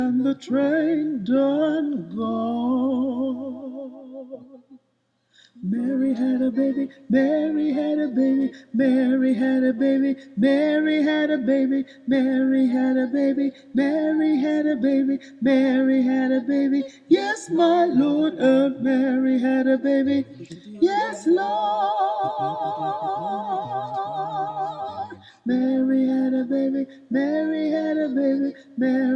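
No technical faults are audible.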